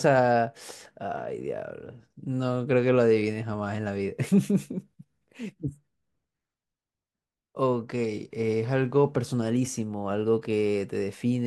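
No faults detected anywhere in this speech recording.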